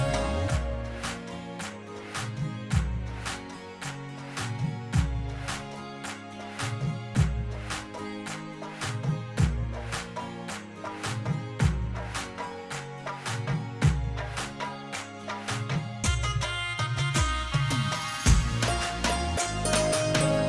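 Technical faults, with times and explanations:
No technical faults can be heard anywhere in this audio.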